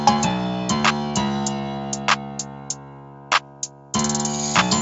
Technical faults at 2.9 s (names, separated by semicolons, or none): none